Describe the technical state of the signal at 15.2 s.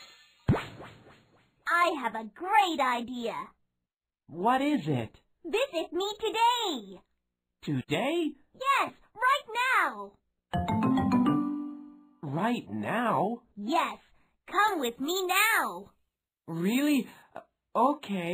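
At 15.2 s you're right inside a stretch of pre-emphasis left on, running from about 14.7 to 17.2 s. The treble lift matches a standard FM 75 µs curve, but the matching de-emphasis cut never got applied, so the highs stay boosted by about 14 dB at 10 kHz relative to 1 kHz. The result is thin and glassy on top, with added sibilance.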